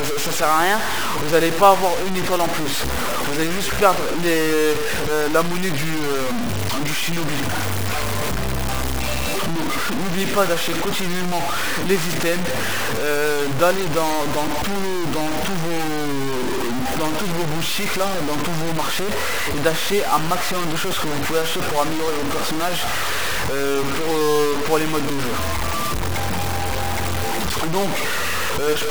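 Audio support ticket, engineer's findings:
Grainy, signal-following distortion throughout; quiet passages sputter or drop to silence. Likely low bit depth without dither; the coarse, undithered rounding fits about 4-bit truncation, with error nearly as loud as the signal. Waveform shows stair-stepped levels; spectrogram shows broadband hash tracking the signal.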